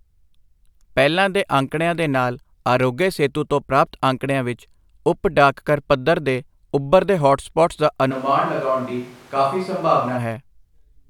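Right after "ਤੇ ਉੱਭਰਦੇ ਹੌਟਸਪੌਟਸ ਦਾ", at 8.13 s, the speech suddenly goes roomy and hollow, thinner in the low end and roughly 5 dB quieter, with room noise rising to about 25 dB under the speech. That's a switch to a distant microphone, likely because the close mic's feed dropped out and a farther pickup filled in. It snaps back to the close sound at 10.16 s, just as abruptly.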